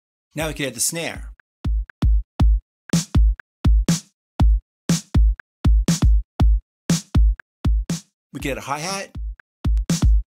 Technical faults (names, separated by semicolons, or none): bit error spike